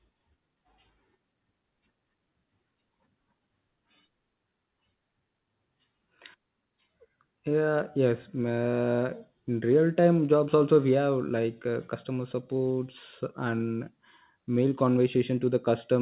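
Nothing goes wrong anywhere in this speech clip; it just has the narrow sound of an ordinary call path, with nothing above about 4 kHz, which fits G.711 mu-law at 64 kbps.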